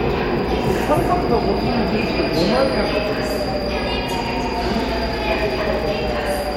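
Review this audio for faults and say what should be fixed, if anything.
Nothing stood out on listening, so there is nothing here that needs fixing.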